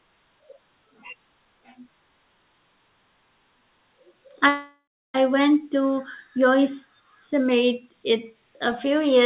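At 4.48 s the speech cuts out until 5.16 s, likely a long network dropout: the last sound stretches into a fading buzz, then goes silent before audio returns with that stretch missing.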